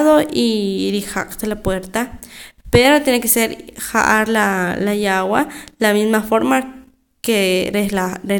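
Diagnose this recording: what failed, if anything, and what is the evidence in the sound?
No failure is audible at any stage, from capture through playback, and the speech shows no artefacts that would point to a fault.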